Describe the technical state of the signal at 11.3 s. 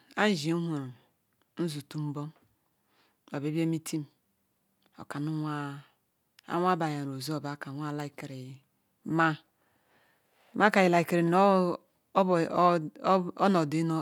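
At 11.3 s the speech signal is intact, with no audible fault at that moment.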